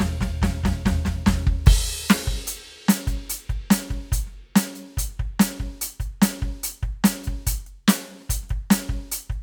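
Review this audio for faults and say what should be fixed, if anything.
Nothing needs fixing in this music clip, as no faults can be heard. No changes are called for.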